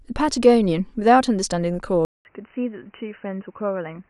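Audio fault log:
2.05–4.10 s, input switched to a poorer device: the recording likely moved mid-clip to a lower-grade microphone or a headset's call profile. After a silence of 200 ms at the switch, the speech comes back narrower, with nothing above 3 kHz, so it sounds dull and boxy and loses its crisp consonants. It is also a few decibels quieter, and a faint new background noise sits well beneath it, carried by the different device.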